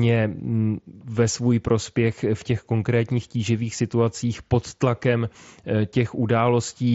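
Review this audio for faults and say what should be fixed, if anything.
Nothing in this recording needs fixing. The speech carries the sound of the Bluetooth mSBC headset codec, with its bandwidth topping out around 8 kHz and only a light grain on the louder moments.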